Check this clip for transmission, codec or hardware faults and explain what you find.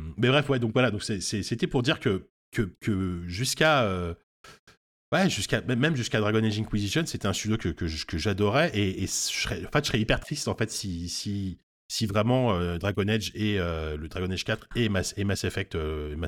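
Nothing in the speech signal points to a transmission, codec or hardware problem; the audio holds steady throughout with no audible faults.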